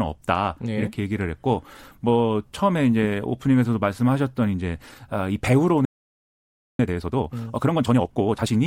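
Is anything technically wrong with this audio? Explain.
Yes, there are two related faults in this speech clip.

A playback stall runs from 5.85 to 6.79 s. The player most likely ran short of data or had its output thread blocked, so the speech cuts off mid-flow into about 0.94 s of silence before resuming.

Time-compressed catch-up follows from 6.79 to 8.55 s. To clear the backlog built up during the stall, the player removes small slices and cross-fades the joins, running at 1.5 times normal speed. The speech sounds hurried at unchanged pitch.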